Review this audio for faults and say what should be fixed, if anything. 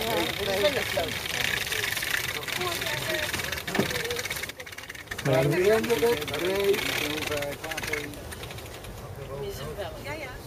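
Frames out of order occur at 0.77 to 1.17 s, 2.86 to 3.26 s and 5.93 to 6.15 s. In each stretch, two adjacent runs swap places. Each run lasts about 186 ms in the first two and 93 ms in the last. This suggests four frames and two frames per run. The result is a garbled flutter.

A sudden gain jump drops the sound and its background noise by about 8 dB at 4.51 s. Both return to the original level at 5.11 s, with no ramp either way. The likely cause is a gain setting applied instantly, from one sample to the next.

Reorder frames by sequence number before decoding, and ramp every gain change over a few milliseconds.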